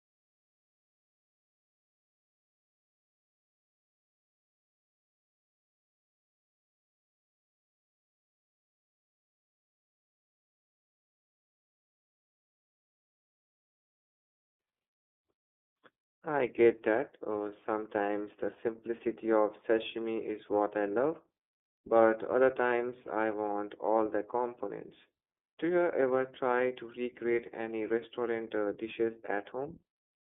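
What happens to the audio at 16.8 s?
At 16.8 s you're hearing the iLBC codec, which runs through the whole clip. Each 30 ms frame is coded on its own, in the 13.33 kbps mode it sounds like, so the speech comes through plainly rough and synthetic, squeezed into a 200 Hz to 3.5 kHz band.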